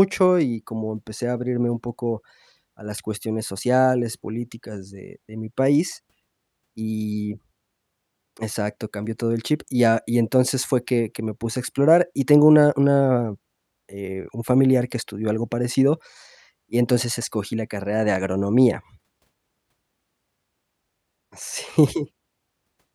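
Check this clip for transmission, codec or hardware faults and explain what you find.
Nothing in the speech signal points to a transmission, codec or hardware problem at any point in the recording.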